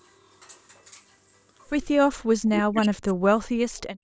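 From 2.41 to 3.35 s the speech sinks sharply, falling by around 40 dB at its deepest and staying affected for roughly a second. This is speech suppressed in double talk, likely because both sides were talking at once and the echo canceller, unable to tell the local talker from loudspeaker echo, turned everything down. On a spectrogram the harmonics fade across the whole band, which already stops at 8 kHz, and the waveform envelope caves in.

Between 3.77 and 3.81 s a faint, brief copy of the speech appears, about 40 dB below the direct sound and trailing it by 348 ms. This is an echo leak, likely a scrap of loudspeaker signal that the far end's canceller failed to remove and sent back. A spectrogram shows a weak smear of harmonic structure matching speech from about a third of a second earlier, and the waveform shows only a tiny bump.

From 3.95 s to the end of the clip, the background is gated by the echo canceller. 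The microphone is clamped down hard for about 0.08 s, dropping the room sound by about 40 dB while the loudspeaker is active. It is heard as a sudden near-silence where the room sound vanishes. On a spectrogram the low-level noise floor turns abruptly dark across all frequencies, and on the waveform the trace flattens almost to a line at the tail.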